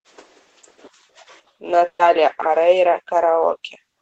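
Speech, with a short smeared stretch from 1.87 to 2.02 s where the sound is held, fades toward silence, then jumps ahead: a burst of packet loss, concealed by the receiver, with about 120 ms of audio missing.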